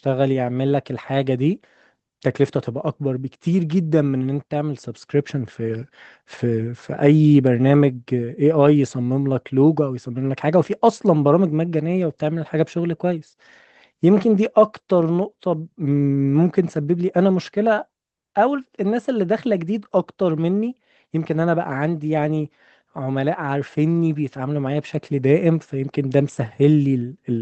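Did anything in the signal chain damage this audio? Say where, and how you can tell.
No, nothing in the chain damaged it.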